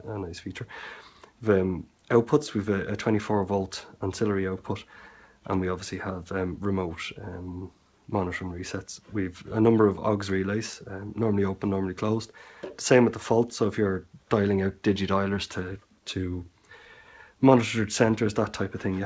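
Nothing here stands out as a fault at any point; it's simply the sound of a call path, with the top end stopping at about 8 kHz in a way that fits a wideband codec such as G.722.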